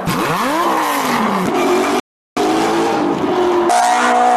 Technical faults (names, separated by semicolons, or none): rebuffering stall